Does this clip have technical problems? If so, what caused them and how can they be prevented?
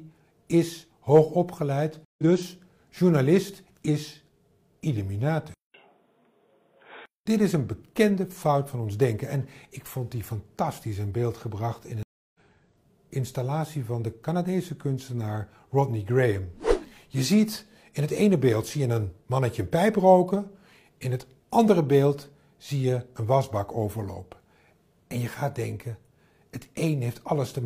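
Yes. A stream reconnect occurs at 2.05 s and again at 12.03 s. The connection dropped, leaving 137 ms and then 314 ms of silence, and a fresh decoder picked up the stream further on, skipping roughly a tenth and then two tenths of a second of audio. Buffering more generously and using a player that resumes from the exact byte position would prevent these gaps.

From 5.54 s to 7.26 s there is a 200 ms silence, after which the sound turns dull, with nothing above 3.8 kHz and a faint new noise floor far below the signal. The loudness stays about the same. This is likely an input switched to a poorer device, such as a headset's call profile. Locking the recording input to one device prevents this.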